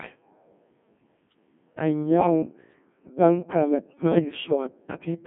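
The whole clip has been through the Codec 2 vocoder, and it's heavy going. You're not hearing the original waveform, just speech rebuilt from sine waves using pitch, voicing, energy and a rough spectral envelope. That's why it comes out buzzy and robotic, boxed into roughly 150 Hz to 3.4 kHz. The thinness fits the 1.6 kbit/s mode, where there's barely room for more than the bones of the voice.

Then there are two short hits of bit errors on digital voice radio. The first runs from 2.18 to 2.27 s and is the nastier one, with a fairly high error rate. Corrupted bits in a vocoder this lean don't just add noise. They scramble the pitch, level and tone settings for a whole chunk, so you get a brief warbly, bleepy lurch. The second, from 4.12 to 4.21 s, is milder because fewer bits flipped. Both last about as long as a couple of codec frames.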